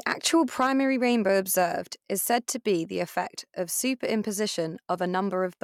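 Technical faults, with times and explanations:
Nothing wrong turns up here; the speech comes across without any technical faults to point to.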